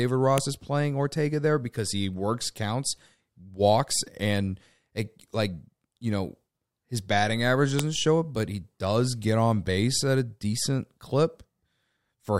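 WAV header bytes were left in place where separate pieces of this speech clip were joined, so each piece's header is played as audio: a file header played as audio. Those few dozen bytes of non-audio data come out as a sharp, loud click at 0.38 s, just before "is playing", and again at 7.79 s, between "know his batting average" and "show it but he". Each snap marks a piece boundary and ignores the speech level around it.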